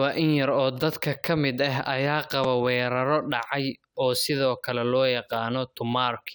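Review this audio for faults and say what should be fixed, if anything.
At 2.44 s a repeated buffer occurs: fresh audio failed to reach the output device in time, so it replayed the block it already held, twice more. Because each repeat is so short, in a way that fits a buffer of about 5 ms, the speech doesn't stutter audibly. Instead the triple playback with hard joins at each seam comes across as a brief click or tiny buzz, with essentially no audio lost. Preventing it means giving the playback path more headroom, through a larger output buffer or higher priority for the audio thread, so new blocks always arrive before the device needs them.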